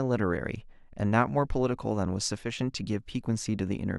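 A digital gain change was likely applied without any ramp, so the level switched from one sample to the next. At 2.38 s the speech drops abruptly by about 4 dB, and the background noise falls with it, a telltale sign that the whole signal was scaled rather than the talker moving away. At 2.59 s the level snaps back up just as suddenly. This brief sudden gain jump is heard as a short, unnatural dip in loudness.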